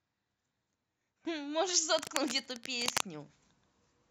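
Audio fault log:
1.98–3.02 s cable scratch noise: dense, uneven scratching bursts sit only slightly below the speech, likely from a worn connector shifting and rapidly changing its contact resistance.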